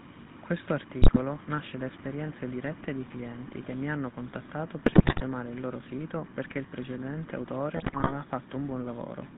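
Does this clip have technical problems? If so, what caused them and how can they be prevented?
Yes. The whole clip has GSM full-rate codec damage. The speech is confined to a band from 150 Hz to 3.7 kHz and has a buzzy, gravelly roughness. That comes from a vocal-tract model driven by sparse pulse excitation, which fits a 13 kbit/s full-rate stream. To prevent it, carry the call on a wideband codec end to end.

GSM bit errors break in at 1.02–1.19 s, 4.86–5.23 s and 7.76–8.13 s as squawks, pops and gargling. Corrupted filter, pitch and gain values bend the spectrum or spike the level frame by frame. Better radio coverage and stronger channel error protection would prevent them.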